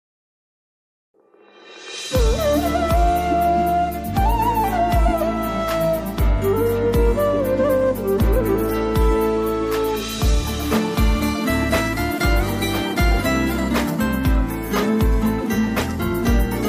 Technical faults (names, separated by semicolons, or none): none